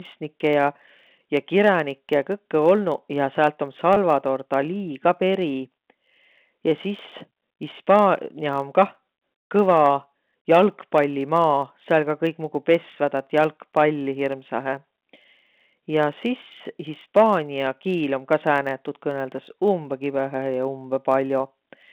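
A block size mismatch (truncated) runs through the whole speech clip: each block's tail is discarded, leaving a buzz at about 91.9 Hz while the pace stays essentially unchanged. Packet loss with pitch repetition at 3.94 to 3.97 s bridges about 20 ms, which fits a single lost packet, by repeating the last pitch period, heard as a briefly held, buzzy sound. All of this travels through a G.711 telephone line limited to roughly 150 Hz to 3.6 kHz.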